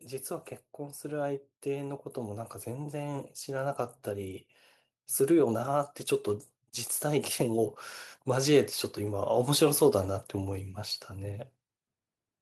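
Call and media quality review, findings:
Speech and background swell together, about 7 dB, 0.27–4.48 s. Automatic gain rising: AGC judged input too quiet, ramped gain gradually over roughly four seconds.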